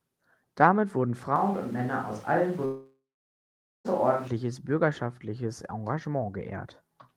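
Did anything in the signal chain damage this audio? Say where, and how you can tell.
Yes. Switch to a distant microphone, 1.36 to 4.27 s, at the capture stage: the sound turns abruptly roomy and hollow with thinner bass, at about the same level, with room noise about 25 dB below the speech. The close microphone's feed likely dropped out, leaving a farther pickup.

Long network dropout, 2.65 to 3.87 s, in the network stage: the last sound stretches into a fading buzz, then about 0.85 s of silence, and the audio resumes with roughly 1.2 s missing. Packets likely stopped arriving while the receiver concealed the gap.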